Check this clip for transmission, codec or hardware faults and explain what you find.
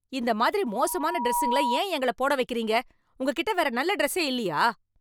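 One hardware fault is audible in the speech. Loudspeaker feedback squeal, 0.64 to 1.83 s: the microphone picked up the loudspeaker it feeds, and loop gain at 961 Hz exceeded one. A pure tone swells over roughly 0.7 s into a squeal about as loud as the speech.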